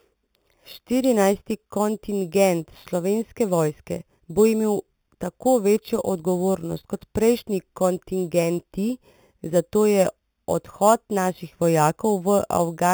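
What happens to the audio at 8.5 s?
At 8.5 s the speech carries imaging from sample-and-hold upsampling, present throughout the clip rather than only at that moment. The sound points to an 8 kHz original raised to 44.1 kHz by repeating samples without a smoothing filter. A mirrored copy fills roughly 4 to 8 kHz, about 18 dB below the speech, as a metallic fizz. Unlike steady hiss, it rises and falls with the speech, and its pitch moves opposite to the voice.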